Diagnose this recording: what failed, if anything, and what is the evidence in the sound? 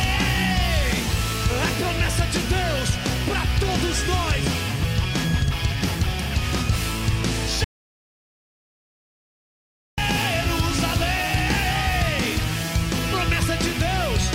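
The audio drops out to silence from 7.64 s to 9.98 s, a hole of about 2.34 s. The sound stops abruptly and resumes mid-flow, and the gap is complete silence with no room tone, hiss or decaying tail. That rules out a noise gate or a fade. Network packet loss would leave short, concealed gaps rather than one long block of silence. The likely cause is the input stage losing its signal, through a disconnected cable or device or a stray mute, while the recorder kept writing silence. Whatever sounded in that gap is unrecoverable.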